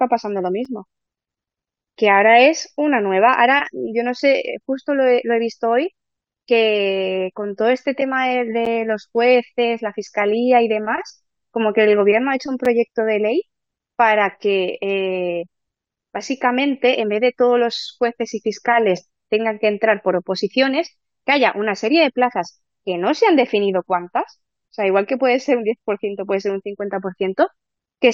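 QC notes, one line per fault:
0.65 s, 8.65 s and 12.65 s, gap between stream segments: three hard-edged silent holes of about 6, 9 and 6 ms in the speech, falling on 4-second segment boundaries. The segments' time stamps leave small gaps that playback fills with silence, and no audio is lost.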